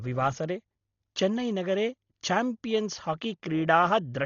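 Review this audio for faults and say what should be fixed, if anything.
Throughout, the speech points to Dolby Digital compression at a starved bitrate, fitting 32 kbps: nothing remains above 6.9 kHz, and noise-filled bands sound dull and gritty. Prevent this by encoding at a much higher bitrate.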